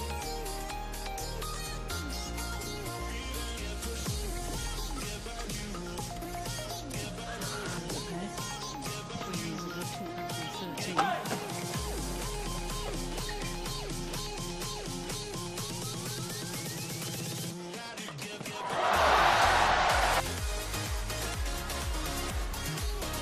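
From start to finish the audio carries plainly audible damage that points to MPEG Layer II coding, likely MP2 compression at a low rate around 80 kbps. The sound is dull, with a gurgling, granular grain, because too few bits leave upper sub-bands switched off or flickering while the remaining bands are coarsely quantised. Unlike a simple low-pass filter, the top end comes and goes rather than being cleanly removed, and the roughness sits inside the remaining sound itself.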